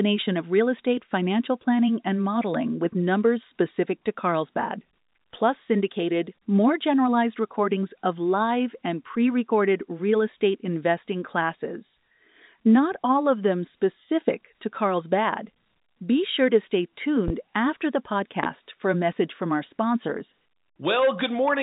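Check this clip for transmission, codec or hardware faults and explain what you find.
Two loud pops stand out in this speech recording. The first runs from 17.28 to 17.32 s, between "sure to stay" and "after the", peaking about 10 dB above the speech. The second runs from 18.44 to 18.47 s, between "after the" and "for a message from", peaking about 15 dB above the speech. Each is a single sharp pop or thump over the speech, which carries on underneath. The likely cause is a sudden voltage step or pulse entering the signal path, from a plug, a switch, static or a driver glitch. Through the G.711 telephone coding, nothing above 3.8 kHz comes through.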